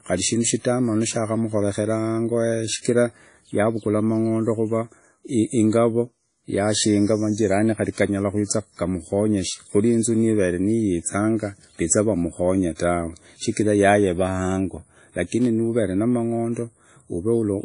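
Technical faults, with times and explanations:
Throughout, WMA compression: plainly audible codec damage rings and washes around the speech, with hiss that breathes with the signal and nothing above 10.1 kHz. This is likely a transform codec near 32 kbps; unlike simple filtering, the noise smears across tens of milliseconds.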